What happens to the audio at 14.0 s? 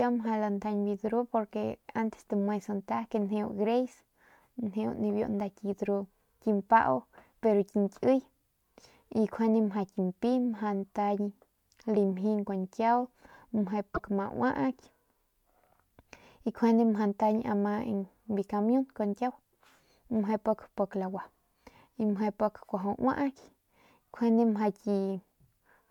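Right around there, from 13.91 to 14.00 s, there's damaged data in the compressed stream. The decoder hits corrupted frames, loses sync and hunts for the next header, so you hear a brief chirp, squawk, click or short hole in the speech.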